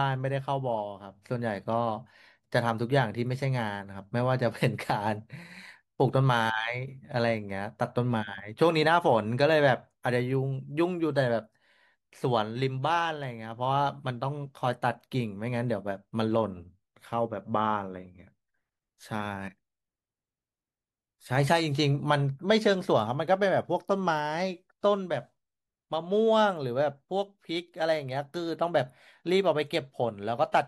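No audible faults anywhere in the recording; nothing calls for attention.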